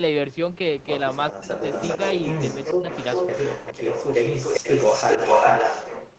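From 1.32 to 1.56 s the speech dips hard, about 30 dB at its deepest, over roughly a fifth of a second. That's speech suppressed in double talk, likely the echo canceller turning everything down because it couldn't tell the near talker from loudspeaker echo. Then from 1.58 to 2.72 s there's an echo leak: a copy of the speech trailing about 395 ms behind, sitting around 5 dB under the main voice, likely from residual loudspeaker pickup that the far end's canceller didn't remove and sent back. At 2.71 to 2.89 s the suppression hits again, dropping about 25 dB for roughly 200 ms. From 2.9 s to 6.14 s the 395 ms echo returns, now about 5 dB louder than the speech itself, so the delayed copy actually dominates the rest of the clip.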